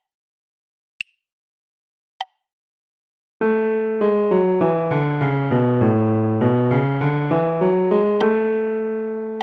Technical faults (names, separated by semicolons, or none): none